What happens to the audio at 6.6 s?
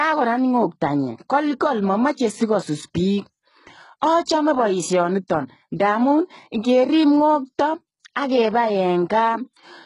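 At 6.6 s the speech sounds gritty and metallic in the upper range, with s sounds turning lispy, and nothing reaching above about 11 kHz. The same damage runs through the whole clip. The likely cause is HE-AAC compression, heavy here, at a rate that fits roughly 12 kbps: only the lower spectrum is truly coded, and the treble is rebuilt by copying lower bands upward, so its harmonics don't line up.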